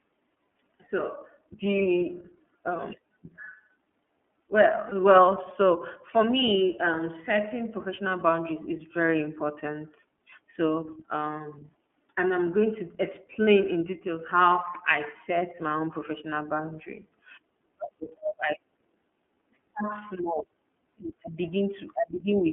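Throughout, the speech carries iLBC codec coloring. The band stops near 200 Hz and 3.4 kHz, so a spectrogram shows an empty region above that. The plainly audible roughness and synthetic buzz fit the 13.33 kbps mode with 30 ms frames.

At 4.88 to 4.93 s, lost iLBC frames appear, consistent with a single dropped 30 ms frame. The decoder repeats the last pitch cycle mixed with noise, giving a brief buzzy, held vowel. The waveform shows a short run of near-identical periods, then normal speech resumes immediately.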